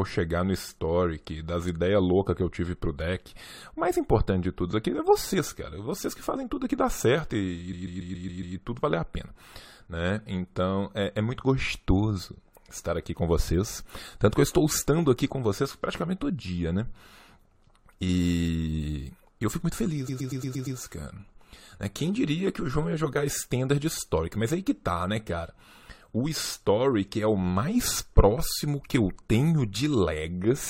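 At 7.72 s, after "dá certo e e", a 139.3 ms block of speech plays six extra times before "e tudo valer a", and at 20.07 s, after "eu fico muito", a 116.1 ms block does the same. These are repeated frames: a run of what sounds like five or six compressed frames was decoded again and again, adding 835.9 ms and 696.6 ms. Each stutter is identical, which marks it as a replay of stored data rather than a speaker's stammer or a silent dropout.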